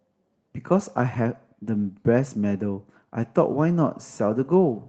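From 1.13 to 1.19 s, a lost packet was rebuilt from error correction: about 40 ms, fitting two packets, replayed from low-bitrate copies. No gap appears in the waveform, but the spectrogram shows rougher, noisier frames.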